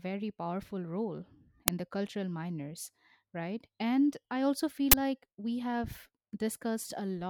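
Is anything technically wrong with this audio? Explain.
Yes. Two uninitialised buffer faults appear in this speech, at 1.68 s and from 4.92 to 4.94 s. Blocks of 5 ms and 20 ms were sent to output before audio was written to them, so leftover memory played as samples, producing a loud crack and a short burst of digital noise.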